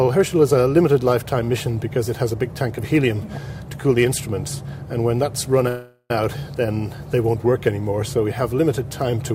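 At 5.68 s the audio stalls in a call audio freeze lasting until 6.11 s. For about 0.42 s the last sound is stretched into a fading buzz or hiss, ending in a brief silence of about 30 ms. The audio then resumes where it stopped, with nothing lost, and everything after it runs about 0.42 s late. The likely cause is delayed packets draining the jitter buffer.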